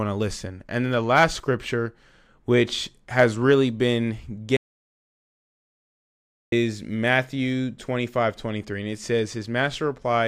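An audio dropout to silence runs from 4.57 to 6.52 s: the speech cuts off mid-flow and about 1.96 s of dead digital silence follows, with no room tone, before the speech resumes. Most likely the input was lost while the recorder kept writing zeros.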